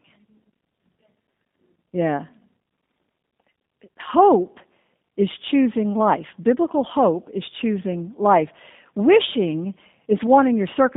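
Speech passed throughout through a G.729 codec, likely the G.729A variant at 8 kbit/s, band-limiting it to 150 Hz to 3.7 kHz and leaving a plainly rough, synthetic, slightly buzzy quality.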